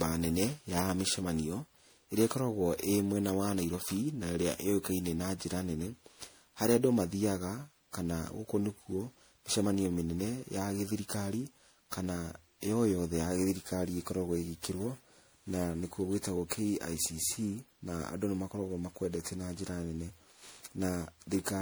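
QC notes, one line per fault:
Throughout: generation loss. The speech has a swirly, hollow, smeared quality, and consonant attacks come out blurred rather than crisp, more damage than one lossy pass would leave. That points to the audio likely being decoded and re-encoded as MP3 around ten times, in a chain that fits roughly 96 kbit/s. Each pass quantises again on a shifted frame grid, so noise and spectral holes pile up.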